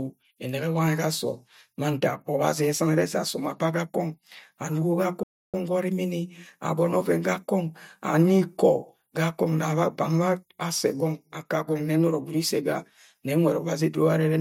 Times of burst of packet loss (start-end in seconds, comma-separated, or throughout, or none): none